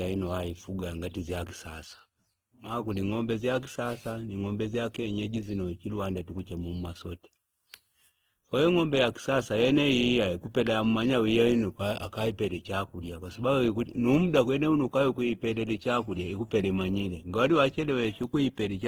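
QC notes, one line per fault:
Throughout, Opus compression: the speech sounds grainy, rough and noisy, though the top end still extends to about 20.2 kHz. This is likely Opus in its CELT music mode, filling starved bands with folded content or noise at a rate near 16 kbps.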